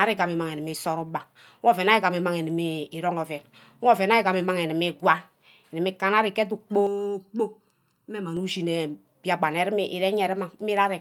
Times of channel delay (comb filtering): 6.87-8.37

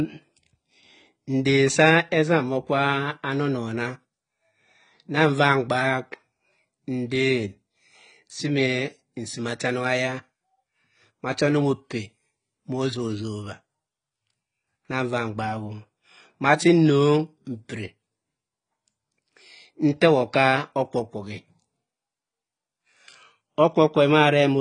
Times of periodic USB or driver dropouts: none

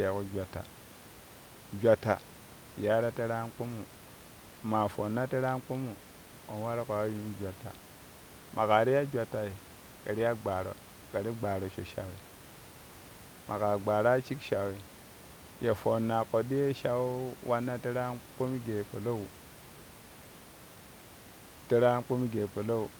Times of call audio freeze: none

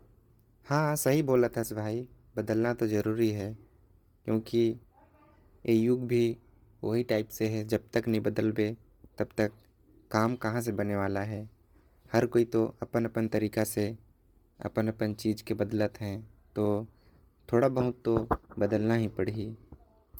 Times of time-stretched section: none

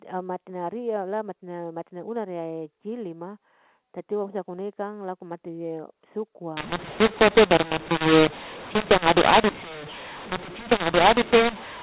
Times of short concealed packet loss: none

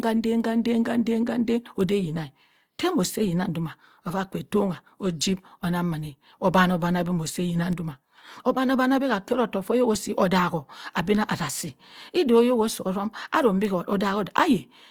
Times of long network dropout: none

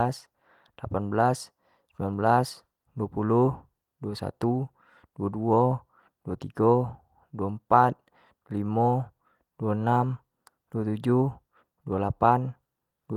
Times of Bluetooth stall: none

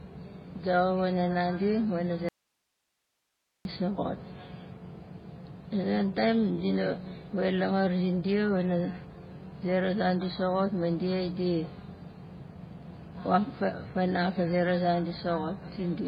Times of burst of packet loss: none

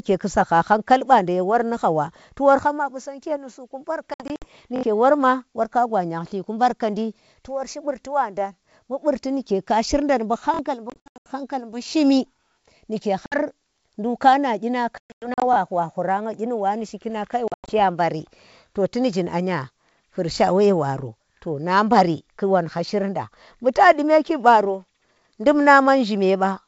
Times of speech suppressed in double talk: none

